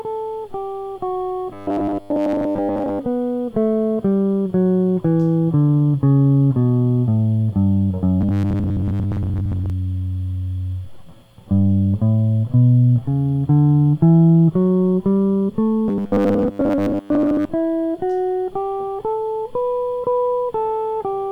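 At 1.53 to 2.99 s, 8.21 to 9.70 s and 15.88 to 17.50 s, the music turns into a rigid, metallic buzz pitched at 100 Hz that still loosely tracks the music underneath. This is robotic sound from repeated short buffers. It is likely caused by audio arriving too seldom, with the playback filling most of each gap by looping the last 10 ms over and over while the real audio is skipped.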